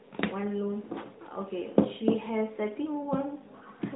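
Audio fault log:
No faults heard.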